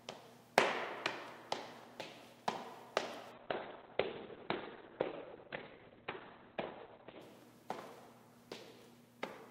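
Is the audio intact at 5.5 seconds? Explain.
No, 5.5 s sits inside a call bitrate drop running from about 3.36 to 7.27 s. The encoder's budget falls from 128 kbps to just 8 kbps, so the audio gets coded coarsely and loses everything above 4 kHz, sounding muffled and rough until it recovers.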